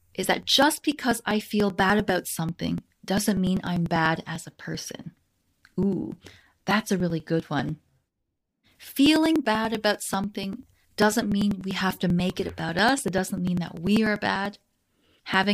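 A speech recording with periodic USB or driver dropouts from 0.13 s to 15.44 s: roughly 2 ms skipped every 0.098 s, ticking along under the talking.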